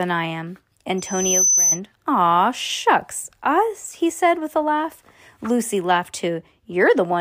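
From 0.98 s to 1.80 s a loudspeaker feedback squeal rises under the speech. A microphone is picking up the loudspeaker it drives, and around 6.1 kHz the loop gain exceeds one, so that frequency feeds on itself. Unlike a steady interference whistle, which sits at a fixed level from the start, this tone swells over about half a second until it stands a little louder than the speech, then stops once the loop is broken.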